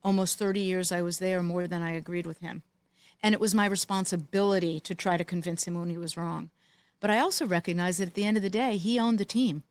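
At 1.61 to 1.80 s, just after "I was there more" and before "I agreed with him", a sound is briefly held too long, with a faint buzzy smear or slight dip before the speech resumes. This is a short stall from a late packet. The packet was not there when it was due, so the jitter buffer ran empty and the receiver stretched the last sound by 34 ms until it arrived. Then it carried on from the same point, so nothing is lost, but playback now runs 34 ms later.

From 6.95 to 7.69 s, after "when he was wrong" and leading into "that at the end", the speech sounds slightly rushed, running at 105% speed while the pitch stays the same. This is a jitter buffer speed-up. The buffer had built up more audio than its target, so the receiver repeatedly cut out short pieces of one or a few pitch periods, removing roughly 40 ms in total to bring the delay back down.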